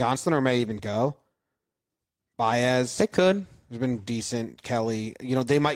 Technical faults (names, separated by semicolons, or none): lost packet rebuilt from error correction